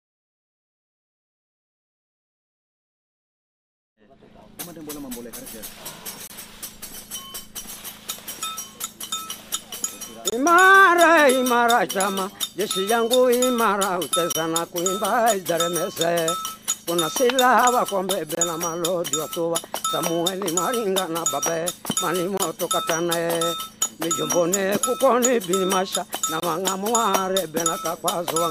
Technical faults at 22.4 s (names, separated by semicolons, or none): gap between chunks